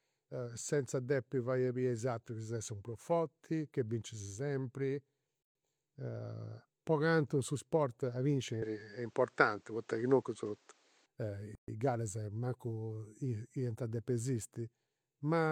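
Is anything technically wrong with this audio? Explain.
Yes, this speech clip has two kinds of fault.

A gap at a join of encoded pieces occurs at 5.43 to 5.55 s and again at 11.55 to 11.68 s, six seconds apart. The audio appears to have been encoded in 6-second pieces and joined without trimming, so each encoder's start-up delay and last-frame padding stayed in as silence. The speech drops out for 125 ms and then 130 ms, with abrupt, slightly smeared edges, and resumes where it stopped.

From 8.62 to 11.06 s, starting just after "cantu su sport a", the sound changes in a way that points to an input switched to a poorer device, likely a different microphone or a headset's call profile. Nothing above 8.6 kHz comes through, so the voice turns duller and boxier. The level shifts by around 5 dB, and a new background noise appears roughly 40 dB below the speech. There is no silence at the switch.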